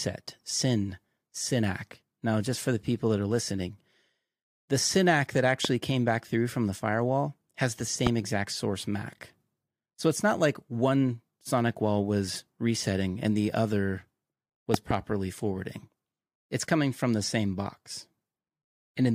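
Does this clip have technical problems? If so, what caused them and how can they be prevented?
Yes. Loud pops occur at 5.65–5.67 s before "came back through from", 8.07–8.09 s after "the firewall has the", and as a double pop at 14.74–14.93 s, reaching about 15–20 dB over the speech. A voltage transient, likely static or a loose connector, is added to the signal. Fix cables firmly and avoid switching equipment while recording.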